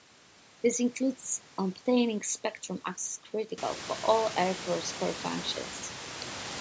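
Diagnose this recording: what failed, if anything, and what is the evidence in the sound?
Nothing failed; no faults heard.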